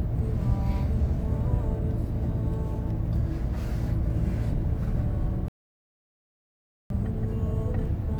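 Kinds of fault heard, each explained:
Rebuffering stall: the player used up the audio it had already downloaded and had to halt playback until more data arrived, so the stream simply waited rather than skipping ahead. In this clip the sound cuts to silence at 5.48 s and stays silent until 6.90 s, then carries on from exactly the point where it stopped. No audio is lost; the gap just inserts about 1.42 s of dead air into the playback.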